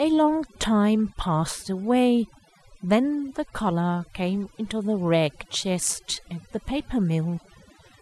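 A noise reduction stage set too aggressively runs throughout, muting frequency bands near its noise estimate, leaving overdone noise removal: a reduced, twinkling background, with quiet parts of the speech cut away along with it.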